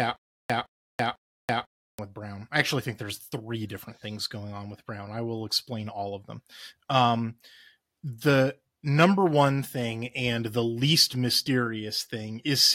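Right from the top of this speech clip, already going when it opens and lasting until about 1.99 s, there's a stutter with silent gaps. A short burst of about 160 ms repeats three times at a steady pace, roughly every half second, with about 330 ms of dead digital silence between repeats. That pattern likely comes from the player or stream stalling, replaying its last fragment at each retry and then running dry, so the audio that belonged in those gaps is gone.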